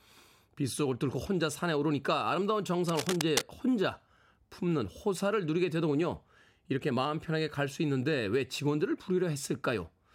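From 2.88 to 3.43 seconds, cable scratch noise rasps over the speech at roughly signal level. A worn cable or connector was likely moved, jolting its contact resistance.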